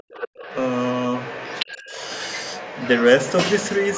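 A short speech recording with two echo-canceller faults. Speech suppressed in double talk appears as a sudden, deep dip at 0.0 to 0.12 s, nearly silent at its worst, and a milder dip of roughly 15 dB from 1.76 to 1.95 s. The canceller was likely unable to separate the local talker from loudspeaker echo while both sides spoke, so it ducked everything. That simultaneous speech is what separates it from an ordinary dropout. The other side's voice leaking through is a second, fainter voice about 15 dB below the talker, running from 0.01 to 3.05 s, again at 3.21 to 3.33 s and from 3.58 s to the end. It is likely residual loudspeaker echo the canceller left in the microphone signal. Because it is a separate voice, it cannot be mistaken for room reverberation trailing the talker.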